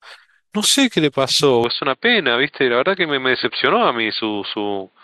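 A speech recording in which the input most likely switched to a poorer device at 1.64 s, with the new path carrying on to the end of the clip. From that point the band is cut off near 4.6 kHz, so the speech turns abruptly duller and boxier, without any gap at the switch and with little change in loudness. A faint new background noise also appears, sitting roughly 50 dB below the speech.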